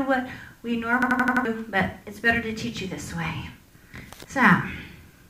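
From 1.02 to 1.45 s, a system hang loop replays one 85.3 ms slice five times. This produces a machine-gun stutter at 11.7 Hz, which fits a 4096-sample ring buffer cycling while the system froze. Roughly 0.4 s of audio is lost. The waveform shows identical repeated blocks, and the spectrogram shows regular vertical seams.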